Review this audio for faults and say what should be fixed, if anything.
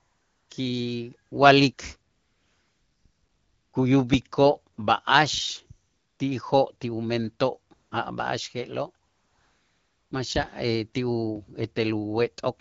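In the pauses, the real background gives way to a smooth, steady hiss that switches in and out at 0 to 0.49 s, 1.29 to 1.31 s, 1.73 to 1.77 s, 2.11 to 3.73 s, 4.73 to 4.77 s, 5.87 to 6.19 s (just before "ti'ijoo' ti umentoo' a'"), 7.73 to 7.91 s (right after "ti'ijoo' ti umentoo'") and 9.05 to 10.11 s (before "maxa' ti"). This is AMR comfort noise. The sender's voice activity detection judged these stretches silent and stopped sending speech frames, so the receiver filled the gaps with synthetic noise built from a rough description of the background. Preventing it means turning off discontinuous transmission on the sending side, or making its voice activity detection less aggressive.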